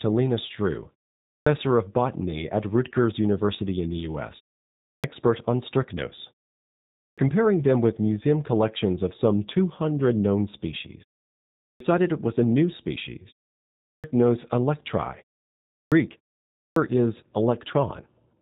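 The whole recording has the G.729 codec's sound from start to finish. It's being squeezed down to 8 kbit/s, and the decoder rebuilds each 10 ms frame from a vocal tract filter, a pitch predictor and a handful of pulses. The speech stays intelligible, but the codec damage is plainly audible, with that slightly rough, synthetic edge. Nothing above about 3.8 kHz comes through, so it sounds narrow and phone-like.

On top of that, you get a clipped start after a pause seven times: at 1.25, 4.82, 6.96, 11.59, 13.82, 15.67 and 16.53 s. Each time, the output seems to have dozed off during a gap of roughly 0.4 to 0.7 s and needs a moment to come back. About 0.21 to 0.25 s of sound is swallowed, so speech jumps in abruptly with its opening missing, right before "of botany at", "on strychnos" and "comparing them with museum" in the first three cases.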